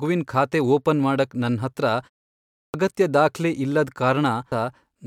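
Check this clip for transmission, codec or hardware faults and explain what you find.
Two faults are audible in this speech clip.

Clipped start after a pause, 2.35 to 2.74 s: during the 0.34 s pause after "ಓಪನ್ ಮಾಡಕ್ ನನ್ ಹತ್ರ", the output device dropped into sleep and needed time to wake and lock again. About 390 ms of the returning speech is swallowed, so it bursts in abruptly just before "ಅಗತ್ಯ ದಾಖ್ಲೆ".

Stream segment skipped, at 4.51 s: the audio jumps abruptly forward with a small blip, and the flow of speech breaks off and resumes further on. The likely cause is a segment of the stream that failed to load, with the player carrying straight on to the next one.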